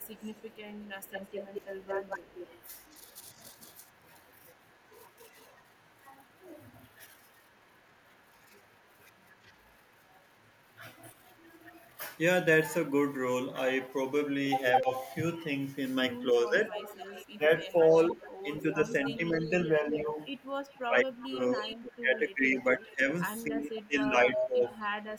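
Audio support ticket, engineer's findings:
Echo leak, 0.00–11.85 s, 14.71–14.80 s, 16.64–25.18 s: speech returns 212 ms late, later 258 ms. It is faint (about -25 dB), briefly near full level, then about -15 dB. Likely the loudspeaker-side echo canceller passing residual pickup.

Speech suppressed in double talk, 1.59–1.63 s, 14.81–14.91 s, 16.33–24.65 s: brief dips of about 5 dB, then dips of up to about 20 dB totalling roughly 3 s. Likely the canceller ducking the talker during overlap.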